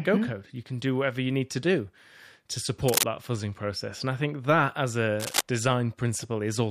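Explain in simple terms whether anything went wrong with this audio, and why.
Two short bursts of scratchy, crackling rustle cut across the speech, each about as loud as the talking: from 2.88 to 3.04 s, between "need to do to" and "that fuzzing process", and from 5.20 to 5.41 s, right after "I think that as". This is cable scratch noise, likely from a worn cable or loose connector being moved.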